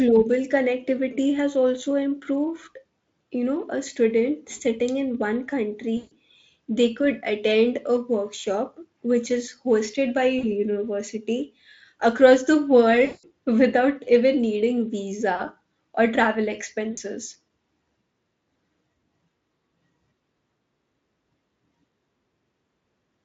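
VoIP packet loss concealed by the speech codec occurs at 5.97 s, 10.39 s, 13.05 s (just after "across the"), 15.35 s (just before "or travel") and 16.91 s. Packets went missing, covering 140, 40, 180, 40 and 60 ms. Each time, the Speex decoder bridged the gap by extrapolating its last pitch and spectral shape at falling gain. The sound smears into a buzzy tone or coloured noise that fades, and stays weak and thin for a short while after the audio returns.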